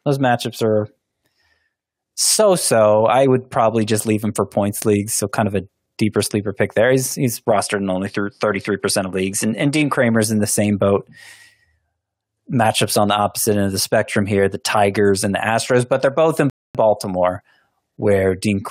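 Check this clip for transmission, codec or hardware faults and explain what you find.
Two faults are audible in this speech clip.

From 7.51 to 9.96 s, just before "in the same boat", the sound turns duller. This is likely an input switched to a poorer device. The replacement device passes a narrower band, with nothing above 11.7 kHz, so the top end of the speech loses its air. A faint new background noise appears, roughly 45 dB below the speech. The level stays about the same, and there is no gap at the switch.

At 16.50 s, right after "but they're both in", the audio stops dead for 0.25 s. This is a rebuffering stall. The player ran out of downloaded audio and waited for more data to arrive. Playback then resumes exactly where it left off. Nothing is lost, but the pause adds about 0.25 s to the clip.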